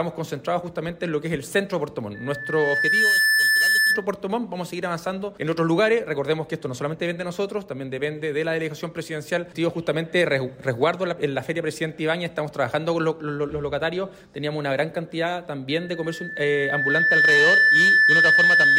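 Loudspeaker feedback squeal at 2.14 to 4.06 s and from 15.70 s to the end: the microphone-to-speaker loop exceeds unity gain at 1.8 kHz, so a tone swells over a second or so above the sound, louder the second time.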